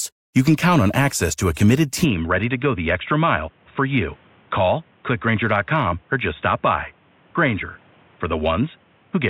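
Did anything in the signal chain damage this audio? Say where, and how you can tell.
Yes. At 2.04 s the input switched to a poorer device, likely at the driver. Nothing above 3.8 kHz remains. Level drops by about 5 dB, with faint new background noise.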